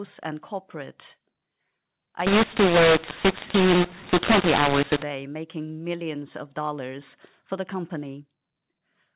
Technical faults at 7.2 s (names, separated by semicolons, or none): none